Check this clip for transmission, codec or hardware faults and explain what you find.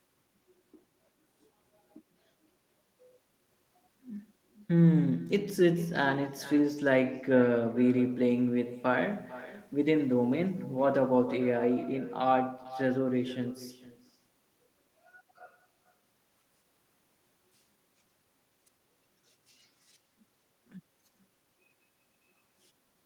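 One fault runs through the whole clip: echo with no canceller. The far end plays the call on a loudspeaker and its microphone sends it back unremoved. Every phrase returns about half a second later, roughly 18 dB quieter and thinner.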